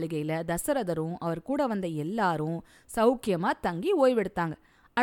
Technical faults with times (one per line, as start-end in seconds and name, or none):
none